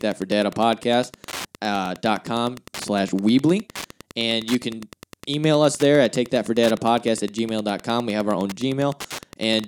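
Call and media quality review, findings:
Wi-Fi interference throughout. Steady ticking about ten times a second, well below the speech. Nearby radio's 102.4 ms beacon rectified by the audio circuit.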